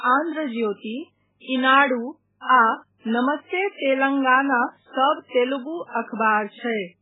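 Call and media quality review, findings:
MP3 compression, heavy, throughout the speech. Watery, swirling texture; smeared attacks. Nothing above 3.8 kHz. Likely an MP3 encoder starved of bits, fitting roughly 8 kbps. Weak frequency lines dropped, flickering frame to frame; treble cut fixed.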